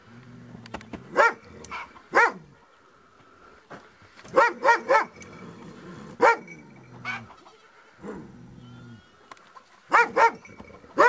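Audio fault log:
Nothing stood out on listening.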